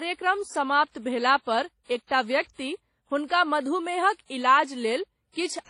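Speech with transcoding between lossy codecs running the whole way through: the smeary, watery texture of an older WMA-style encode sits under HE-AAC's own artefacts, with nothing above 11.2 kHz. That layered sound fits a 32 kbit/s WMA pass likely re-encoded to HE-AAC at a similar rate.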